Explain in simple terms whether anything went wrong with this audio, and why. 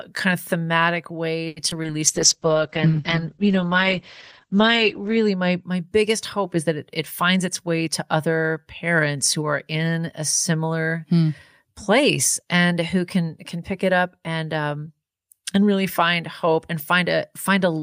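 Several things went wrong, all early in the clip.

At 1.47 s there is a short stall from a late packet. A piece of audio arrived late, so the receiver held the last sound for about 90 ms while waiting. Nothing is lost, but that sound drags on slightly too long.

Right after, from 1.70 to 1.88 s, there is short concealed packet loss, with a second gap inside it at 1.83 to 1.87 s. A few small pieces never arrived. The receiver guessed at them by continuing the last sound, which leaves a brief smear or wobble.

From 2.09 to 5.69 s comes a call bitrate drop. The connection looked weaker, so the sound was sent with far less detail. For about three seconds it turns rough and muffled, with everything above 8 kHz cut away, before the clarity returns.

From 7.29 to 8.43 s there is a jitter buffer speed-up. Too much audio had piled up waiting, so the receiver trimmed many tiny slices to catch up. 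About a tenth of a second was removed, and the sound runs roughly 8 percent fast at unchanged pitch, feeling slightly hurried.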